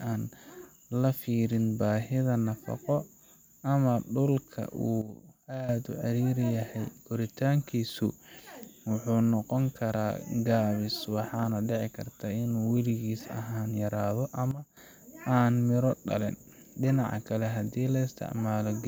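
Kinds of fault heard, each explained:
Sudden gain jump: The speech and its background noise drop together by about 12 dB in a single step, with no fade. The level stays down from 5.02 to 5.69 s, then snaps back. The same drop returns from 14.51 to 14.77 s. Both changes happen instantly at each edge. The likely cause is a digital gain setting applied without a ramp, so the level changes from one sample to the next.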